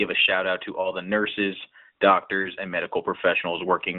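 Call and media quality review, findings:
Lost AMR speech frames, 0.82–0.92 s: radio-side bit errors failed the frame checksum; decoder concealed by repeating last good pitch and vocal tract parameters at reduced gain. Heard as a brief dip or warble, consistent with one lost 20 ms frame.

Lost AMR speech frames, 2.42–2.49 s: same concealment over a longer gap, pointing to two consecutive 20 ms frames (about 40 ms). Repeated parameters with decaying gain smear and thin the sound, then a short weak or rough onset as decoding resumes. The narrowband AMR path (200 Hz to 3.7 kHz line band) carries through both events.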